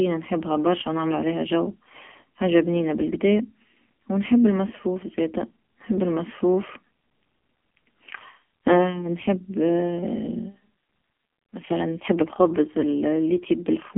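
From start to finish, the speech carries the sound of the AMR narrowband mobile codec. The band is squeezed to roughly 150 Hz to 3.5 kHz, and nothing survives above 3.7 kHz. The codec rebuilds the voice from a vocal-tract model fed by sparse pulses in short frames. Damage here is heavy. The voice turns buzzy and synthetic, which fits a low AMR-NB mode near 6 kbps. Sibilants lose their sheen, and the lows thin out.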